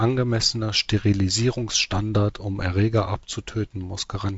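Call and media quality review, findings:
No faults found on this speech clip; G.722 wideband path working as expected, band limited at about 7.7 kHz with light upper-band hiss and slightly grainier low band, consistent with the 48 kbit/s mode.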